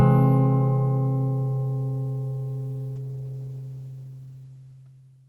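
A call bitrate drop starts at 2.96 s and lasts to the end: the encoder was pushed onto far fewer bits, consistent with a fall from about 32 to 13 kbps. Top end narrows from 20 kHz to 12 kHz, and the sound turns coarse and muffled, roughest over the last 1.6 s.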